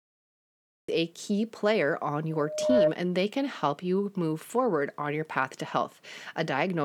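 The clip is speech with two faults. It opens with a cut-off start: digital silence until 0.88 s, then the speech begins abruptly, partway into a sound, just before "a key player on," with no natural attack, because capture began late. From 2.30 to 2.94 s, between "a key player on" and "and they can help," a loudspeaker feedback squeal appears. A 610 Hz tone swells over roughly half a second to about 10 dB above the speech. The microphone is picking up its own loudspeaker, with loop gain above one at that frequency.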